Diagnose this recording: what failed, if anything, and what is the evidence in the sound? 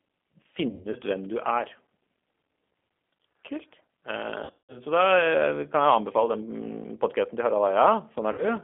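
The codec stage degraded the whole speech clip. G.729 coding damage is plainly audible throughout. The band runs from about 250 Hz to 3.4 kHz. The voice sounds rough and synthetic. That fits an 8 kbit/s coder rebuilding speech from a filter, pitch and sparse pulses.

The network dropped packets, and the speech codec concealed the loss. Damage falls at 0.69 to 0.96 s, 4.45 to 4.80 s and 8.32 to 8.55 s. The decoder stretched its last pitch and filter into a fading buzzy tone or coloured noise. The second burst is worst, with 180 ms lost in one run.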